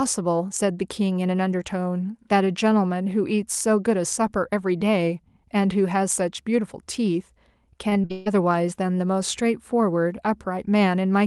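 Around 7.89 s the speech breaks up with repeated packet loss, which gives it that robotic sound. Between 7.89 and 8.28 s there are four separate holes. Each one gets papered over by stretching the last bit of sound, and then the next hole arrives. About 220 ms of real audio goes missing, and roughly 58% of that stretch is patched-in material. The longest gap is 139 ms. All of this sits on a call path whose top end stops near 12 kHz, which fits Opus at around 32 kbps.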